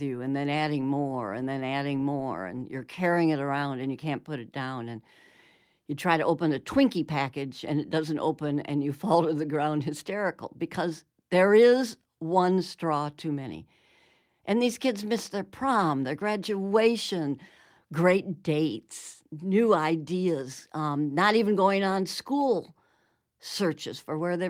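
Nothing in this speech recording points to a technical fault: the signal stays steady and intact, with no interruptions, distortion or level problems anywhere in it.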